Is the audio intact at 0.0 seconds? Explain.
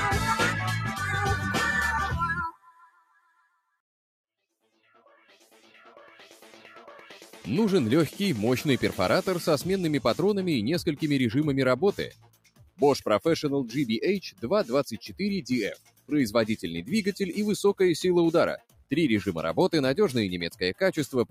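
No. From the very start and throughout, a noise suppressor designed for speech is acting on material it wasn't built for, so at 0.0 seconds the sound is already being processed. The suppressor treats sustained tones, ambience and decay as noise and pulls them down while letting sharp onsets pass, with gain swinging by around 15 dB. The result is audible pumping and fluttering, with held sounds and tails sinking and thinning after each attack.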